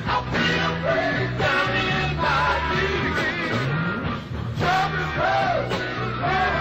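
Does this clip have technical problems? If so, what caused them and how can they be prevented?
Yes. From 3.66 to 5.25 s the audio abruptly slows by about 5.3% and drops roughly a semitone (about 95 cents), then snaps back. This is likely a drift correction step, where clock-matching software jumped the playback rate to rebalance its buffer. Unlike wow or flutter, the shift is a single clean step up and down, not a continuous wobble. Prevent it by sharing one clock between devices or using gradual, fine-grained resampling correction.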